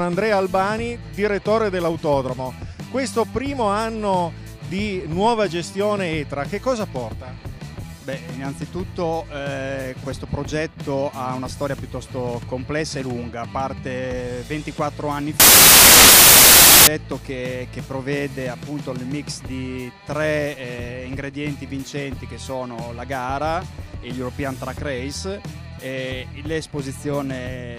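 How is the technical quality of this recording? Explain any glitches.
There is one glitch. Samples built from the wrong bytes, from 15.40 to 16.87 s: for about 1.5 seconds the reader misassembles each sample's bytes, whether shifted by one byte, swapped in order, or read at the wrong alignment. The rapidly fluctuating low-order bits end up as the most significant part of every value, so the sound is replaced by a burst of loud, harsh broadband noise, close to white on loud sounds.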